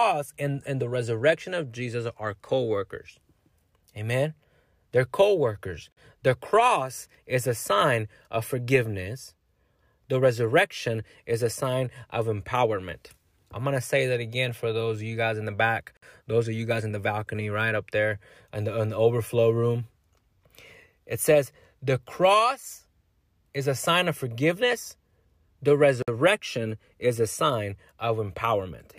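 Short dropouts break the continuous speech three times, at 5.92 s, 15.97 s and 26.02 s, each lasting about 47 to 54 ms, with edges smeared by the codec. At 15.97 s it falls between "guys in the back" and "those of you guys". The speech then resumes where it stopped. These are gaps at joins of encoded pieces, spaced 10 s apart: each separately encoded segment kept its start-up delay and padded final frame, leaving silence at every join.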